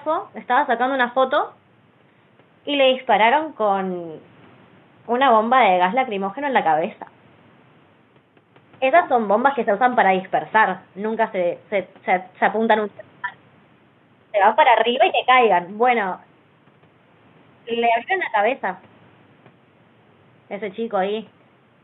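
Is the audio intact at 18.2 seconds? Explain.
Yes, the audio is intact at 18.2 seconds, with nothing there beyond the faint room noise about 34 dB below the speech, which belongs to the recording space rather than the system.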